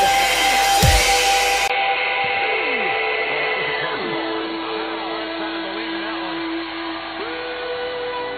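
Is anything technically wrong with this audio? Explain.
Yes, two faults can be heard.

Mains hum runs through the whole clip. It is a steady low tone at 50 Hz, sitting roughly 20 dB below the sound. Power-line current is leaking into the signal path. A ground loop or a nearby transformer would do this. The hum never stops or changes. It sits under everything as a constant drone.

At 1.68 s the sound changes abruptly and stays that way to the end. A gap of about 20 ms comes first. After it, nothing reaches above 4.3 kHz, so the sound turns dull and boxy. A new noise floor appears, roughly 40 dB below the signal. Loudness barely changes. This is likely an input switched to a poorer device with a narrower band and its own noise.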